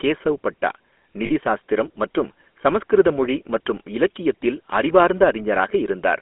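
GSM full-rate codec damage runs through the whole of this speech clip and is plainly audible. The voice has the codec's buzzy, gravelly roughness, consistent with a 13 kbps GSM full-rate coder that models the vocal tract and drives it with a coarse pulse excitation. The sound sits in a narrow line band of roughly 250 Hz to 3.4 kHz. Lost GSM frames occur from 1.26 to 1.31 s, right after "கேசவ் பட்டா". For about 40 ms, which fits two missing 20 ms frames, the decoder repeats the last good frame, leaving a brief rough, metallic ring.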